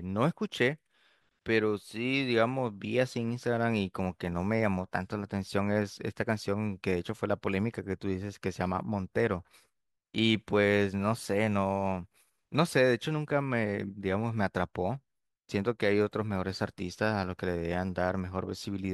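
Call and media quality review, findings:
No faults found in the speech recording. Nothing to escalate on this ticket.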